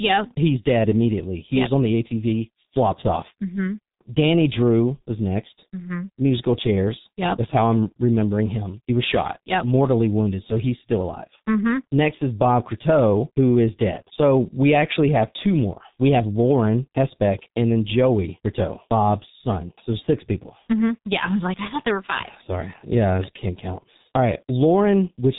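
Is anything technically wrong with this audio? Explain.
Yes. The speech is damaged by the G.723.1 codec throughout. Everything above about 3.8 kHz is gone, and the coarse 30 ms frames and slow voice-model updates leave the voice muffled, hoarse and smeared at consonants, which fits roughly 6 kbit/s. A simple low-pass filter would dull the sound without the hoarseness.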